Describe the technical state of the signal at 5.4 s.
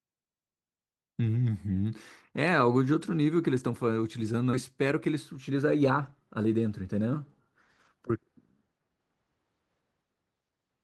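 Jitter buffer speed-up is under way at 5.4 s, part of a stretch running from 4.85 to 6.88 s. The receiver's buffer had built up more audio than its target, so it trimmed away short slices of one or a few pitch periods over and over, shedding around a fifth of a second in total. Speech here plays about 10% fast while keeping its normal pitch, giving the delivery a rushed, slightly compressed feel.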